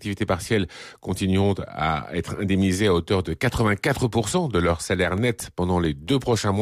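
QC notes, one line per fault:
4.95–6.08 s, CD scratch ticks: six brief ticks after "de leur", each a few milliseconds, as the player masks unrecoverable data once per disc revolution.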